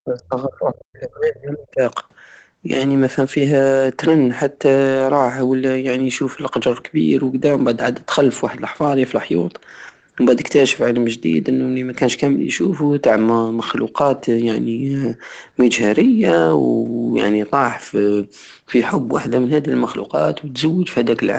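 From 0 to 1.81 s the speech sinks by around 35 dB, likely speech suppressed in double talk: the echo canceller turned down its own talker together with the loudspeaker echo.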